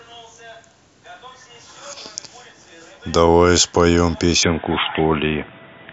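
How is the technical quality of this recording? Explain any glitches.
The recording has one clear fault. From 4.43 s to the end, the input switched to a poorer device, likely a change of microphone or headset profile. Nothing reaches above 3.8 kHz, so the speech turns dull and boxy. Unlike a codec's bandwidth drop, the level also shifts by about 5 dB and a new, faint noise floor appears, with no silence at the switch.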